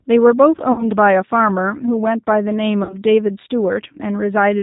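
From the first moment to the last, the speech carries G.729 codec damage that is plainly audible. Nothing above 4 kHz survives, and voiced sounds have the slightly rough, synthetic grain of a coder that rebuilds each 10 ms frame from a vocal tract filter, a pitch predictor and a handful of pulses. That fits an 8 kbit/s G.729A coder. Unlike simple low-pass filtering, the roughness sits inside the voice itself rather than only dulling it.

From 0.72 to 0.91 s comes the first burst of VoIP packet loss concealed by the speech codec. About 60 ms of audio, which fits three lost packets, is replaced by the decoder extending its last pitch and filter settings. The result is a stretched, buzzy tone or coloured noise that fades as the gain drops frame by frame, and the speech stays weak for a short while after real audio resumes.

The same VoIP packet loss concealment returns from 2.83 to 2.96 s, again covering about 60 ms. 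What separates it from a plain dropout or a hard cut is that the gap is never silent. It is filled with a decaying synthetic tone or noise built from the preceding sound, and the recovery afterwards is gradual rather than instant, because each new frame is decoded from the damaged state of the one before it.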